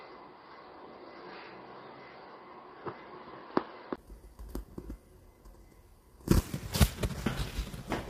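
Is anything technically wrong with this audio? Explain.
Yes, there are two faults. From the start to 3.98 s the audio comes through a poorer input device, likely a headset or second microphone. Its narrow band cuts everything above 4.7 kHz, so the sound is dull and boxy, with a faint noise floor roughly 45 dB down. A 20 ms gap at 3.98 s marks the switch back. On a spectrogram the top edge jumps upward there, and the waveform level shifts by roughly 5 dB.

Throughout, the audio is rough and grainy, with noise between harmonics. This is likely low-delay AAC compression (AAC-ELD), whose short frames resolve harmonics poorly at a rate that fits about 32 kbps. A spectrogram shows smeared, speckled harmonics and a hard ceiling at 15.6 kHz.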